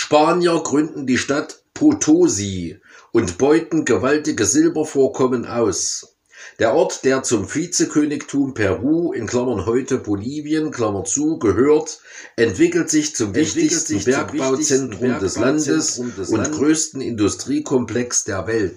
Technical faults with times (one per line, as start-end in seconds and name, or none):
13.14-16.64 doubled audio track